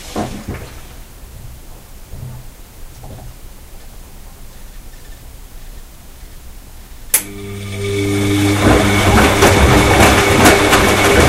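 From 8.66 s to the end at 11.29 s, hard clipping sets in: the signal is driven about 10 dB past what a stage can pass, so peaks are sliced flat. The squared tops add high harmonics, giving the sound a harsh fuzz on every loud moment.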